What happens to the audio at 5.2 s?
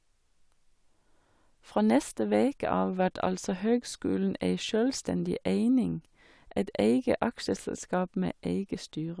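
Nothing goes wrong at 5.2 s: the speech runs through that moment intact, with no dropout, click or other audible fault.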